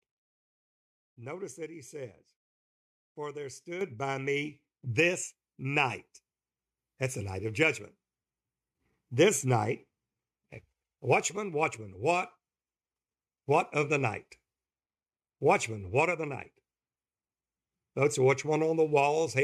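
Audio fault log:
3.81 s and 4.83 s, microphone volume stepped up: the speech and the room noise behind it jump louder together in two abrupt steps, about 9 dB just before "by me this" and about 5 dB more right after "by me". The call software judged the input too quiet and raised the device's microphone gain all at once rather than gradually.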